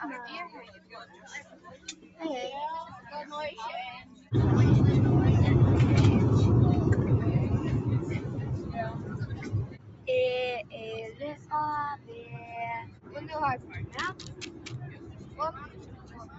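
Across the whole clip the level pumps and flutters, with held sound and its tails thinning while attacks push through. This is a noise suppressor applied to music or sounds: a speech-tuned suppressor treats steady content as noise, swinging gain by roughly 15 dB.

Sound cut by the noise suppressor is heard as sinking, shortened passages at 0.67–2.19 s (about 10 dB down), 4.04–4.31 s (about 8 dB), 8.6–10.08 s (about 11 dB), 11.11–11.51 s, 11.96–12.5 s, 12.83–13.18 s, and from 13.57 s to the end (each about 10 dB). In each, sustained or decaying sound was classed as noise and held down.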